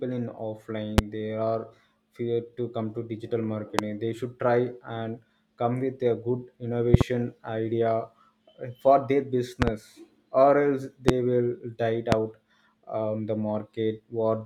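A transient voltage step, likely from a plug, switch, static or driver glitch, entered the signal chain. This produced a loud pop about 20 to 25 dB above the speech at 0.98–1.01 s; at 3.79–3.81 s, just after "to digital"; as a double pop at 6.94–7.03 s; as another double pop at 9.62–9.70 s, following "for their"; at 11.09–11.11 s; and at 12.12–12.15 s. Through each one the speech carries on underneath.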